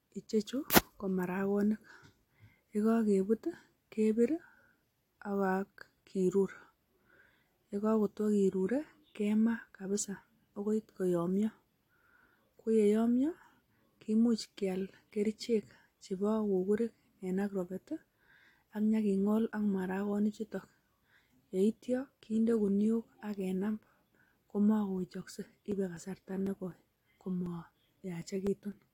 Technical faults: periodic USB or driver dropouts

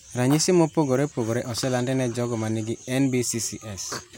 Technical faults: none

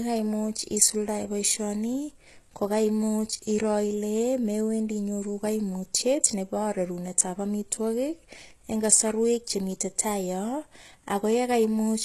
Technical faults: HE-AAC compression

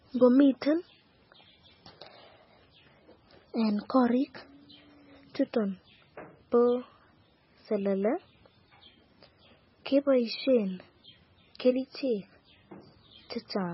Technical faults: MP3 compression

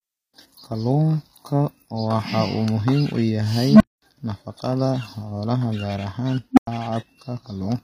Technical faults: HE-AAC compression; unstable filter

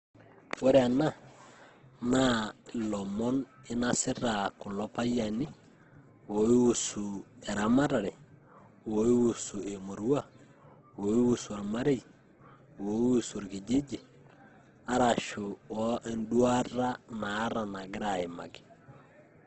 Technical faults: Opus compression

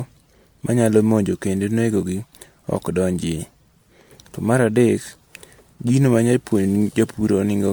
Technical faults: generation loss

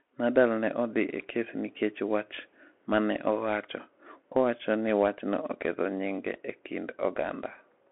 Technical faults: Bluetooth CVSD headset codec

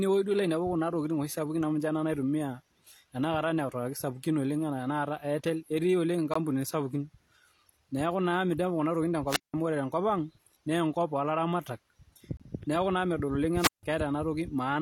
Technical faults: gap between stream segments; wireless microphone squelch dropout

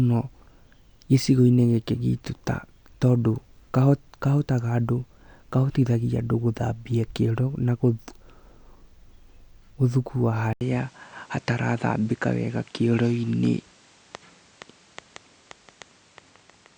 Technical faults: input switched to a poorer device

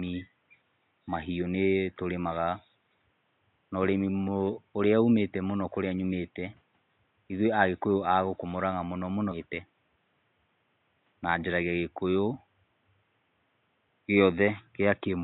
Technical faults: stream segment skipped

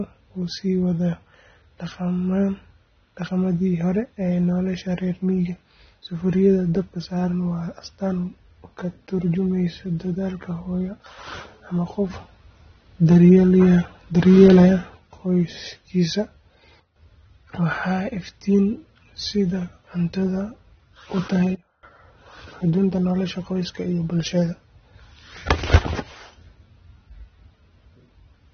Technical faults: AAC compression; sudden gain jump

